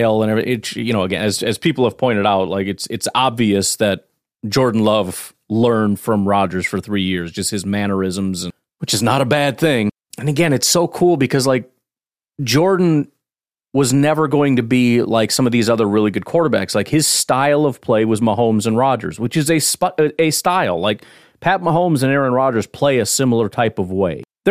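Nothing in this speech recording stands out as a technical fault; it's easy listening all the way, with nothing that needs pointing out.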